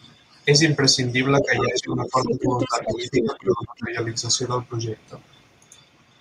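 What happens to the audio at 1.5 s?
At 1.5 s a second voice cuts in, only slightly quieter than the main speaker. It lasts from 1.41 to 1.66 s. This is the other side's voice leaking through. The far end was likely playing on the talker's loudspeaker, and the echo canceller did not remove all of it from the microphone signal. The leftover echo rides on top of the main speech at nearly the same level.

Over the same moment the main speech sinks. Between 1.41 and 3.96 s it loses level, falling by around 15 dB at its lowest, with roughly two seconds of the span affected. This is speech suppressed in double talk. With both sides talking at once, the echo canceller likely could not separate the local talker from the loudspeaker echo, so it pulled the whole signal down and took the wanted speech with it.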